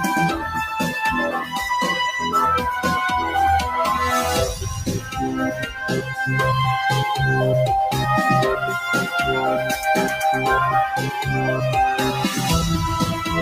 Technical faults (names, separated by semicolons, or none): noise suppressor applied to music or sounds; sound cut by the noise suppressor